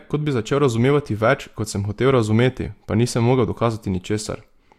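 No technical faults are audible anywhere in this recording.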